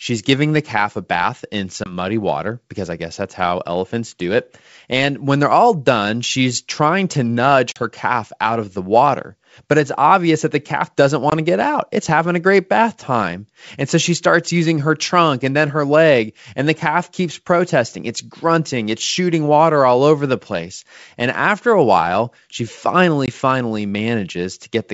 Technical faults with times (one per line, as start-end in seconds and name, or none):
1.84-1.93 packet loss on an ADPCM call
7.72-7.82 packet loss on an ADPCM call
11.30-11.33 packet loss on an ADPCM call
23.26-23.30 packet loss on an ADPCM call